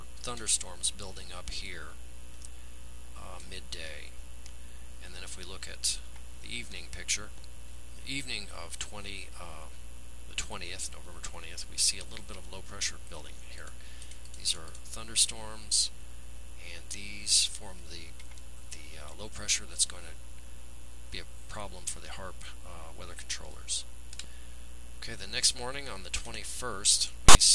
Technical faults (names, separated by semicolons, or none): file tags played as audio